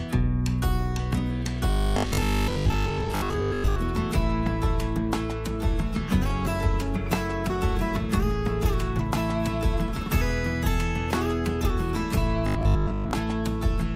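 From 1.70 to 3.80 s, and again from 12.47 to 13.11 s, the audio turns into a rigid, metallic buzz at 50 Hz that follows the original only loosely: robotic sound from repeated short buffers. The likely cause is input arriving too seldom, so the playback side fills the gaps by looping the most recent 20 ms segment, which sets the buzz rate. Roughly 70 percent of each span is repeated material, with the true audio in between skipped.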